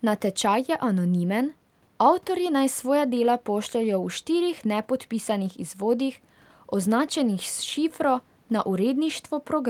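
Speech recording with no audible technical faults.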